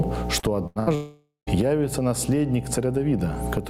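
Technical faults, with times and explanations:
Throughout, mains hum: power-line coupling, probably a ground loop, adds a steady 60 Hz tone with low harmonics, sitting only about 10 dB below the sound.
Throughout, gain pumping: input gain likely set far too high, so a fast limiter repeatedly clamps it, swinging roughly 15 dB; loud and soft parts end up closer in level, and the sound is squashed.
0.39 to 0.46 s, short concealed packet loss: about 40 ms never reached the decoder in time; the receiver extended the previous sound for 34 ms, leaving a brief smear.
0.67 to 0.79 s and 0.80 to 0.90 s, burst of packet loss: twice, about 80 ms went missing; concealment held the last sound for 87 and 73 ms, fading as buzz or hiss.
0.95 to 1.50 s, long network dropout: likely no audio arrived for about 520 ms; the last sound was stretched and faded out, ending in roughly 130 ms of silence before resuming.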